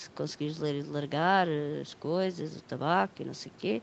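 Nothing stood out on listening to this speech.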